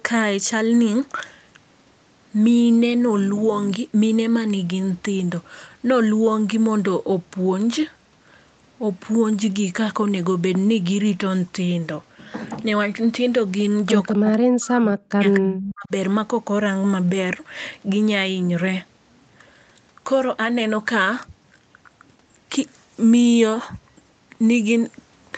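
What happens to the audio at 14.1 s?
An echo leak appears from 14.10 to 14.14 s: a faint, brief copy of the far side's speech, delayed by 220 ms and well below the voice, slips through, likely because a loudspeaker-side echo canceller failed to remove everything its microphone picked up.

Speech is then suppressed in double talk from 14.14 to 15.91 s. The voice dips, at its deepest nearly to silence, over roughly one and a half seconds, likely because the canceller could not separate talker from echo while both sides spoke and turned both down.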